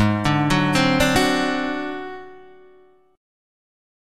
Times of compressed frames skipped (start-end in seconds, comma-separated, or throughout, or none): 1.14